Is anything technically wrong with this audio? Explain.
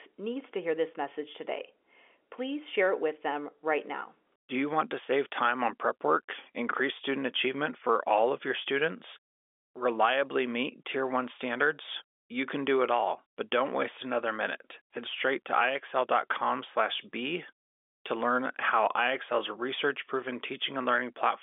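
No, nothing technically wrong can be heard here.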